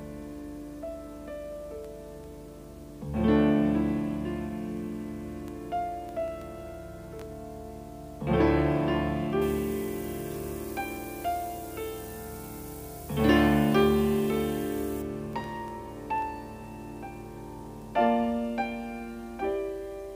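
From 9.42 s to 15.02 s the audio turns abruptly thin and glassy, its upper range hissing and sharp while the lower body seems to drain away. That stretch has pre-emphasis left on: the treble was lifted along the 75 µs FM curve but the complementary de-emphasis was never applied, so content around 10 kHz sits about 14 dB higher relative to 1 kHz than it should.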